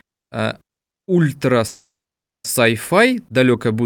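A speech clip with a call audio freeze from 1.67 to 2.46 s, just after "э ультра". The sound at that point trails off into a brief decaying fill and then about 0.57 s of silence. The speech then resumes where it left off, 770 ms late, with nothing lost. That fits packets being likely held up in transit until the jitter buffer ran dry. On a waveform this shows as a fading tail into a flat gap. A spectrogram shows a smeared, dimming band followed by an empty stretch.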